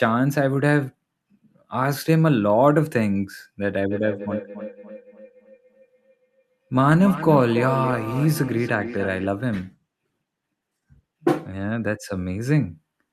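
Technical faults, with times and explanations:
3.91–9.32 s, feedback echo between two devices: the sound returns about every 0.3 s, thinner and ringing, peaking about 11 dB below the speech. A second device in the room replays the call into an open microphone, and neither echo canceller recognises that path.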